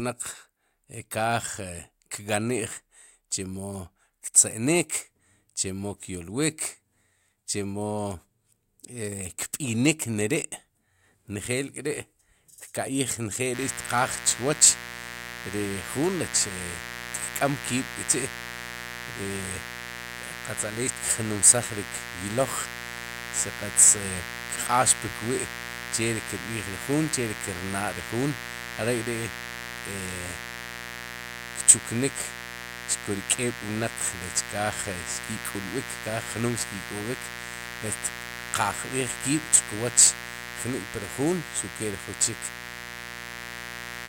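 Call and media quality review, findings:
Mains buzz, 13.5 s to end of clip. Steady raspy 60 Hz buzz, loud, about 10 dB under the speech. Probable dimmer, rectifier or unshielded line injecting switching spikes twice per cycle. Harmonics reach kilohertz, unlike a smooth hum.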